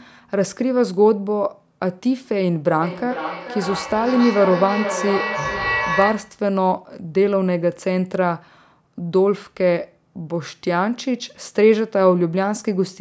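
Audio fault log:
2.82–6.46 s feedback echo between two devices: another device's loudspeaker feeds this microphone again, so speech returns roughly every 0.4 s, thin and ringing, peaking about 6 dB below the speech.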